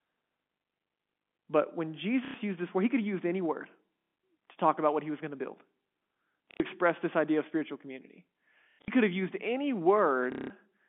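Packet loss with last packet repeated: lost packets were covered by replaying the previous one, at 2.25 s after "but when", 3.99 s, 6.51 s before "express this idea of", 8.64 to 8.88 s after "idea of spiritual community", and 10.32 s. Each repetition gives a brief, robotic stutter of 90 to 180 ms, with a low buzz consistent with roughly 30 ms packets.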